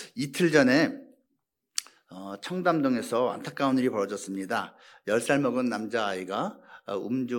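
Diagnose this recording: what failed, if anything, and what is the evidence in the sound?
Nothing in the recording points to a failure at any stage; the speech comes across steady and intact, with no sign of trouble anywhere along the chain.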